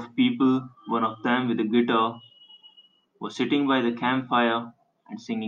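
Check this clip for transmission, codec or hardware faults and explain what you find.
No faults found in this speech.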